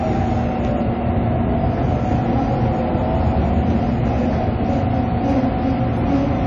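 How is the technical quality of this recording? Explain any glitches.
Technical quality is poor, with two faults running through the whole recording of sounds.

Hard clipping, throughout: peaks overdriven by about 5 dB are cut flat, around one percent of samples, adding upper harmonics heard as crackle on loud moments.

AAC compression, likely the cause, throughout: nothing survives above 11.3 kHz and plainly audible coding damage leaves the sound dull and smeared, consistent with a low bitrate near 32 kbps.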